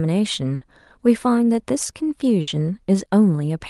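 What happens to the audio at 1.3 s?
Nothing goes wrong at 1.3 s: the speech there comes through intact, with only the ordinary coding character of the call path it passed through.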